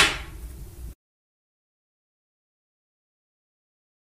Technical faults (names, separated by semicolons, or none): lost LE Audio frames